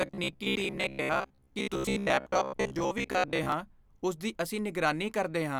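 From 0.02 s to 3.52 s the speech takes on robotic sound from repeated short buffers. It becomes a stiff, metallic buzz pitched at about 66.7 Hz. The voice still roughly tracks the words. This is likely caused by audio arriving too slowly. The playback fills each gap by looping its last 15 ms of sound. Roughly half the signal is such repeats. Normal speech returns just before "ਉਸ ਦੀ ਅਸੀਂ".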